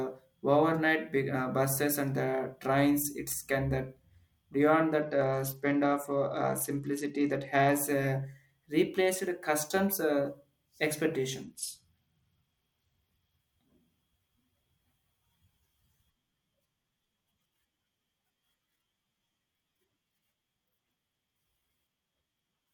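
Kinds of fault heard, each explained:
Bluetooth SBC bit pool drop: Twice in this speech the Bluetooth link appears to have cut the SBC bit pool sharply, from 28 to 11. That leaves roughly 90 kbps for the audio. The top sub-bands are starved of bits and the rest are coarsely quantised. So the treble goes dull and a gritty grain sits on the speech. The first drop runs from 5.02 to 7.79 s, right after "it's can that beyond". The second runs from 11.43 to 13.40 s.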